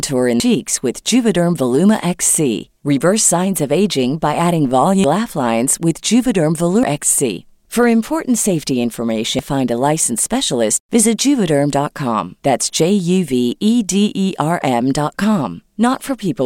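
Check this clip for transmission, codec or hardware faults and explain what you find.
The speech carries four brief faults from damaged data in a compressed stream. They fall at 0.40 to 0.43 s, then at 5.04 s, 6.83 s and 9.39 s. Part of the coded data was lost or corrupted at these points. The decoder misreads those frames, loses its place and hunts for the next valid frame header. Each event sounds like a short chirp or blip cutting into the speech. The first is the longest, about 30 ms.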